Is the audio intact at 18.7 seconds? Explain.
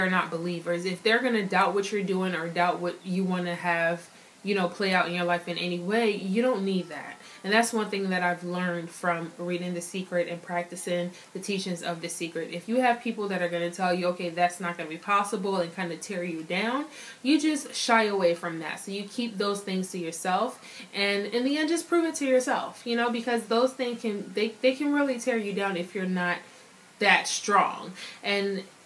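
Yes, at 18.7 seconds the audio is intact, with no dropout, click, distortion or other fault at that moment.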